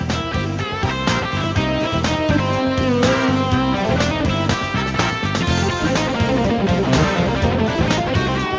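Nothing stood out on listening, and the absence of content above 8 kHz simply reflects the wideband call path it came through, consistent with a codec such as G.722.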